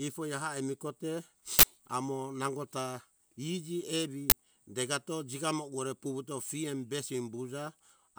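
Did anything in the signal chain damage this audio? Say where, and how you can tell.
Yes. Uninitialised buffers in the driver stage. Loud digital noise bursts hit at 1.59 s and 4.30 s, lasting 43 and 21 ms. Leftover memory was played as sound.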